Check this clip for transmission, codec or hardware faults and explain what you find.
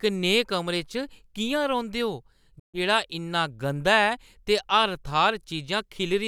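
One fault is present in this speech. From 2.59 to 2.79 s the sound drops out completely to silence, then resumes further along, as if it had kept playing unheard. The likely cause is a Bluetooth dropout: audio packets reached the headphones too late and were discarded, losing about 140 ms of audio, which fits roughly ten dropped frames.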